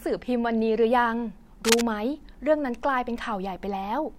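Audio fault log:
1.64–1.82 s, cable scratch noise: a short stretch of dense, ragged crackle lies over the speech for under a fifth of a second, at roughly the same loudness as the talker. The bursts are irregular in spacing and strength, giving a scraping, rustling texture. This points to a likely worn cable, connector or control being shifted, its contact resistance fluctuating rapidly and injecting noise into the signal path.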